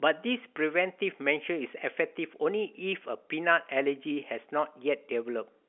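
Telephone-band speech carried by G.711 coding with nothing technically wrong, its content confined to roughly 250 Hz to 3.4 kHz with nothing above 3.7 kHz, as expected of a 64 kbps A-law line.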